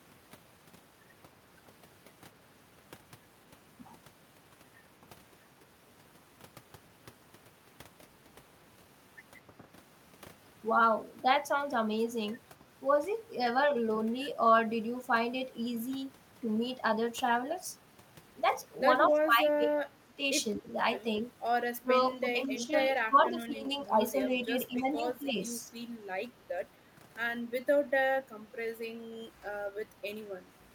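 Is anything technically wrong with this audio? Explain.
Yes. The speech is intermittently turned down, and faint delayed copies of it leak back.

Speech suppressed in double talk: the level sags briefly at 9.59 to 9.63 s and again at 24.47 to 25.72 s, only slightly, by around 5 dB. From 19.09 to 20.67 s and from 21.76 to 23.89 s, it drops much harder, by roughly 20 to 25 dB, in pieces. This is likely an echo canceller that cannot separate this talker from loudspeaker echo while both sides speak, so it attenuates everything.

Echo leak: short, quiet repeats of the speech surface at 19.03 to 19.09 s, 22.61 to 22.65 s and 28.18 to 28.24 s. Each trails the original by 219 ms and sits roughly 20 to 25 dB below it. The likely cause is a far-end loudspeaker whose echo canceller left residual pickup that was sent back down the line.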